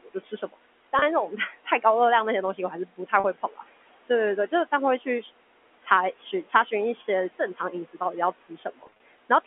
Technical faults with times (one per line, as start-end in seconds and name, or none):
0.00-9.46 noise suppressor artifacts
0.00-0.57 speech cut by the noise suppressor
0.99-1.02 packet loss with pitch repetition
1.28-1.85 speech cut by the noise suppressor
2.90-3.69 speech cut by the noise suppressor
3.20-3.24 packet loss with pitch repetition
4.48-5.26 speech cut by the noise suppressor
5.80-6.72 speech cut by the noise suppressor
7.06-9.46 speech cut by the noise suppressor
8.84-9.00 packet loss with pitch repetition